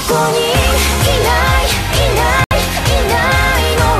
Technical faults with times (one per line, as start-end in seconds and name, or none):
2.44-2.53 corrupt frame muted